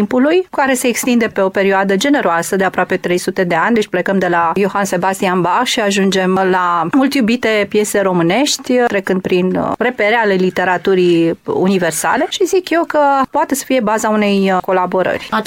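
No technical faults are audible anywhere in the audio.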